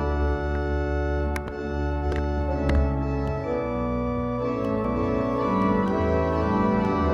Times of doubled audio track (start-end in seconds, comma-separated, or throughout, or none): 4.85-7.13